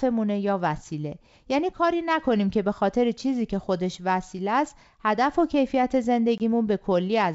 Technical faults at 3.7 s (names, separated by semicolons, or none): none